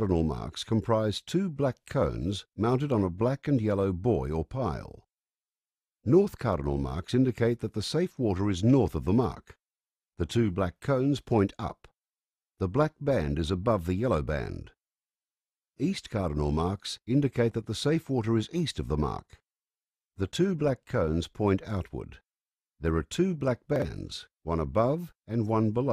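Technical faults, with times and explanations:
7.84 to 7.88 s and 23.76 to 23.82 s, chunks out of order: a 20 ms chunk plays one chunk late at 7.84 s and two chunks late at 23.76 s. This scrambles the sequence and leaves three hard joins each time. Unlike a dropout or stutter, nothing is lost or repeated.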